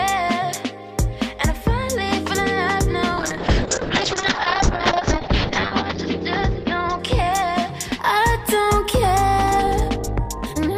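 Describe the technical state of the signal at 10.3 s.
A time-stretched section runs from 9.37 s to 10.77 s, covering 10.3 s. The sound plays about 1.75 times faster at unchanged pitch, likely from software dropping short pieces to shorten it, so this stretch sounds rushed, with an abrupt jump in pace.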